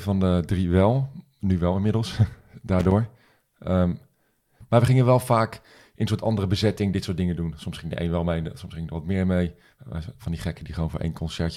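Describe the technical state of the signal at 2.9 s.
Loose connector crackle runs from 2.79 to 2.91 s, about 0.12 s of the speech. A worn or dirty contact is rapidly making and breaking as it shifts, chopping the signal on and off, which comes through as an irregular burst of crackling, scratchy noise.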